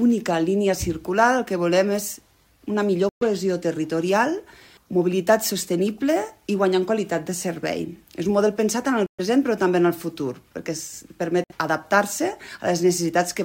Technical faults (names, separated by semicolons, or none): Bluetooth stall